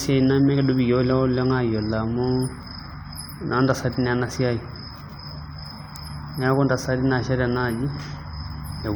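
Throughout the speech, the sound is swirly and hollow, and consonant attacks are softened and smeared. There is no content above 20 kHz. The likely cause is generation loss. The audio seems to have been decoded and re-encoded a few times, perhaps three, with a lossy codec such as AAC-LC at around 96 kbit/s. Each pass quantised on a shifted frame grid. Noise piled up beyond what one encode at that rate would leave.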